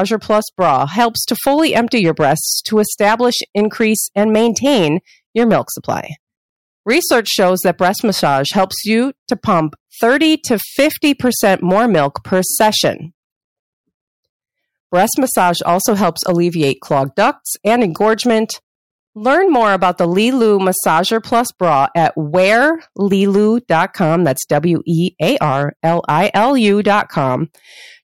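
Hard clipping runs through the whole speech clip. The signal was driven about 8 dB past what a stage could pass, so peaks are sliced flat. Roughly 2 percent of samples hit the ceiling. Each flat top adds high harmonics, heard as crackle on louder syllables.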